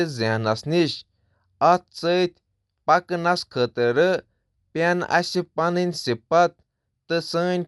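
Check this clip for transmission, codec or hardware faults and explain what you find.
One codec fault runs through the whole speech clip: Dolby Digital compression is the likely cause. Nothing is present above 11.4 kHz, giving a dull, narrowed top, and the coding damage is plainly audible. It sounds like a starved AC-3 encoder, which fits a bitrate around 64 kbps. It drops mantissa bits for many frequency lines, and the decoder fills those gaps with dither noise. That leaves a rough, fluttering hiss clinging to voiced tones, unlike the tinkly, swirling artefacts of a low-rate MP3.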